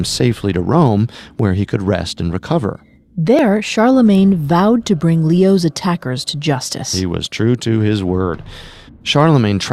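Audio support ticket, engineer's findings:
Tiny skips at 1.39 s (before "he could rest and"), 3.39 s, 7.37 s (before "to his word"). Overlap between stream segments: overlapping timestamps on the 2-second segment boundaries, so the player trims 10–15 ms of genuine speech and the waveform jumps.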